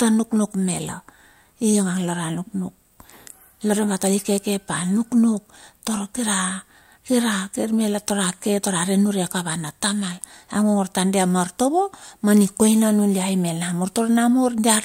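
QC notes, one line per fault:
Nothing stood out on listening to this speech recording.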